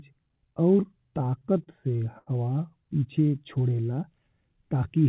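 Repeated stalls (stutter) run from 1.24 to 2.29 s. Within that stretch the speech hitches six times: packets reached the receiver late, so its jitter buffer ran dry and the last sound was stretched to fill each wait, about 165 ms in all and the longest about 81 ms. Nothing is lost, yet roughly a sixth of the span is filler, so the speech drags and stammers, heard through the call path's narrowband sound with nothing above 4 kHz, which fits G.711.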